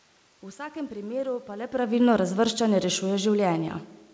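Nothing stood out on listening to this speech clip; the background room noise and the change in level around 1.5 s, as the talker shifts relative to the microphone, belong to the recording itself, and the call path's band limit near 8 kHz is what that route normally imposes.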